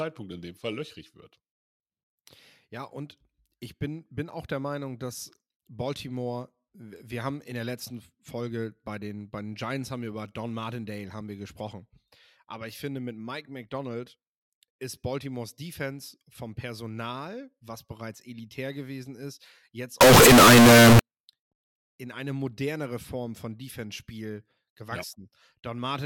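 Right after "elitär gewesen ist jetzt", from 20.01 to 20.99 s, the speech turns into a loud, harsh, nearly square buzz, with background noise as loud as the talker, yet the pitch still comes through. That's the float-read-as-integer signature, likely 32-bit float samples being read as 32-bit integers.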